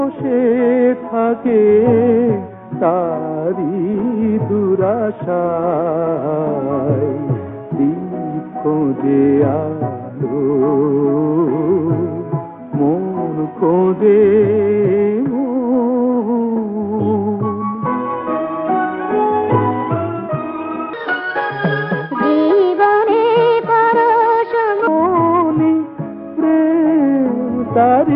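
Between 20.93 and 24.87 s, playback was likely run against the wrong clock, producing a section at the wrong speed. The audio runs 1.47 times too fast, so pitch and tempo rise together by about seven semitones, and the sound turns high and hurried.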